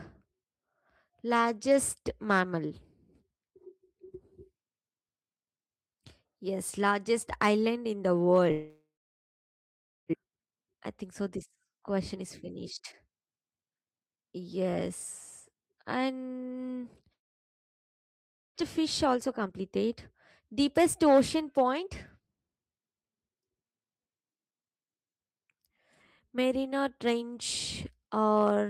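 Right after "largest island in the", from 8.51 to 10.15 s, the sound trails off into about 1.2 s of silence, likely a long network dropout, and about a second never comes back. Then, from 10.23 to 14.45 s, a jitter buffer speed-up trims snippets to drain the backlog, so speech runs at 114% with pitch unchanged. From 17.13 to 18.59 s there's another stretch of about 1.4 s of silence, likely a second long network dropout, with about a second lost. Speed-ups follow at 18.62 to 19.91 s (121%, noticeably rushed) and 20.40 to 22.49 s (107%).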